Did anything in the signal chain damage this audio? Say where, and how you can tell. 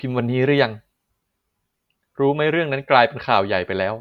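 No, nothing in the chain from capture through playback has audibly damaged this speech recording.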